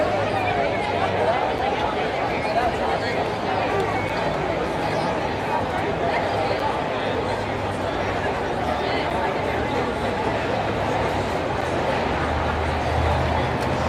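At 1.58, 4.09, 6.60, 9.10 and 11.61 s there is a gap between chunks: a hard-edged 6.5 ms hole every 2.5 s. Unlike a dropout, no sound is lost; it resumes exactly where it paused.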